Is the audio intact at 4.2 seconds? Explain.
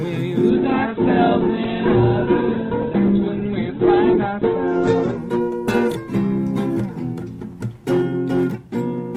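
No. At 4.2 seconds the audio sits inside a call bitrate drop running from 0.51 s to 8.75 s. The encoder's budget falls from 96 kbps to 7 kbps, bottoming out for about 3.7 s, and the coded bandwidth shrinks from 20 kHz to 4 kHz. It sounds muffled, rough and watery. A spectrogram would show content above 4 kHz abruptly gone beneath a flat ceiling, with the remaining energy looking blocky and smeared.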